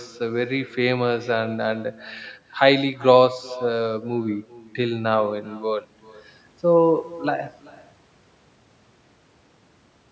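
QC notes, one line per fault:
Throughout: echo with no canceller. Every phrase is trailed by a quieter copy arriving roughly 400 ms later, at about 21 dB below the direct speech, sounding thinner than the original. The far end is playing the call over a loudspeaker, its microphone recaptures that playback along with the room's reflections, and with no echo cancellation the signal returns over the network round trip. The band-limiting of the call microphone path, with nothing above 8 kHz, applies to both copies.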